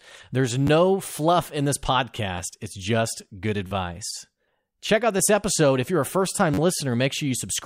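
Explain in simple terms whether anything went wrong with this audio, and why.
Four times, the playback device ran out of fresh audio and played its last small chunk again, a repeated buffer. Each chunk lasts about 11 ms, which fits a 512-sample buffer. At 0.67 s, just before "fluff in this", and at 2.38 s, before "it's just good", one chunk repeats, giving a tiny click. From 3.67 to 3.71 s, and 6.54 to 6.58 s after "you're a first time", it repeats four extra times, making a brief buzz.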